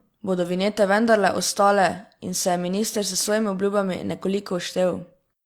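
No technical faults can be heard at any point in the speech, so there is nothing to describe in time order.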